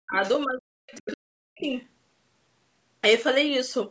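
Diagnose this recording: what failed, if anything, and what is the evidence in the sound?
The echo canceller in the call processing stage likely mistook simultaneous talk for loudspeaker echo and clamped its own talker. This speech suppressed in double talk first appears from 0.00 to 0.23 s, affecting about a fifth of a second, then from 0.45 to 1.73 s, affecting about a second. The talker's speech sinks deeply, by something like 40 dB at worst.

The same canceller also likely failed to subtract all of the far-end signal picked up from the loudspeaker, so the other side's voice leaks through. A fairly audible burst sits from 0.95 to 1.17 s, roughly 15 dB under the talker. A much fainter trace, around 30 dB down, follows from 1.59 to 1.80 s. Both are short scraps rather than sustained echo, and both land inside or at the edge of the suppressed stretch.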